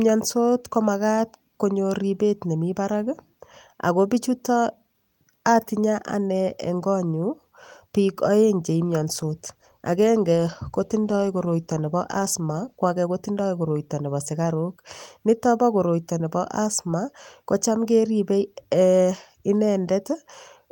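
From 8.67 s to 13.01 s the speech goes through a call bitrate drop. The call's bandwidth estimate fell and the encoder was pushed to spend far fewer bits, and the sound fits a fall from about 32 kbps to about 16 kbps, staying at its worst for roughly four seconds. The speech turns rough and watery, with a duller top end. On a spectrogram the upper band thins and turns blotchy, with a flatter, more smeared texture, until full detail returns near 13.0 s.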